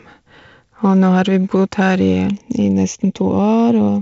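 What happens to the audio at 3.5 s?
At 3.5 s the speech is inside a stretch of channel delay (comb filtering) running from 2.28 s to the end. One channel lags the other by about a third of a millisecond, and mixing them cancels evenly spaced frequencies from around 1.5 kHz upward. The voice sounds hollow and phasey. Unlike flanging, the notches stay fixed rather than sweeping.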